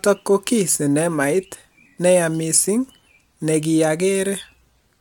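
No technical faults can be heard anywhere in the recording.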